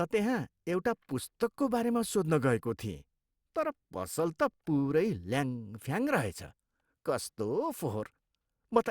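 Nothing stood out on listening to this speech recording.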